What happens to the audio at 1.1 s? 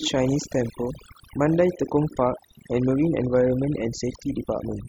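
At 1.1 s, as across the whole clip, overdone noise removal is at work: a noise reduction stage set far too aggressively is pulling individual frequency bands down or shutting them off whenever they sit close to its noise estimate, and the quieter parts of the speech get caught with them. The background drops and breaks up into twinkling specks.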